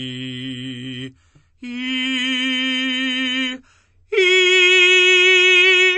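Throughout the music, the audio was likely squeezed through MP3 compression at a very low bitrate, so the encoder discarded everything above 8.3 kHz and let weak frequency lines flicker on and off between frames, leaving a dull top end and plainly audible watery, swirling artefacts.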